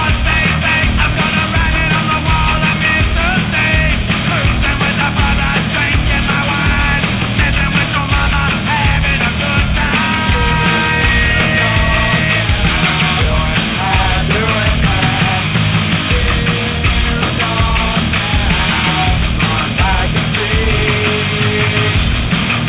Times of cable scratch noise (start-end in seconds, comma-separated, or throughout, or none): none